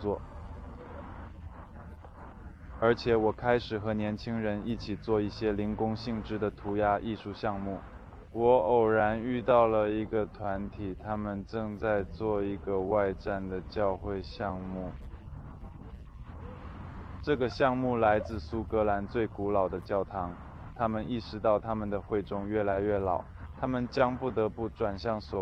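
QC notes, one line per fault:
Nothing stood out on listening.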